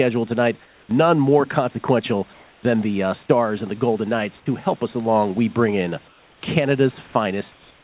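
At 0.65 to 0.89 s the room background turns into comfort noise. The pauses at 2.33 to 2.63 s, after "more consequential" and before "the uh", at 6.08 to 6.41 s, after "along we bring in", and at 7.52 to 7.84 s, do the same. The real background becomes a flat, featureless hiss, about 2 to 3 dB quieter except in the second gap. The likely cause is discontinuous transmission, with the receiver synthesizing noise while the sender sends only occasional updates.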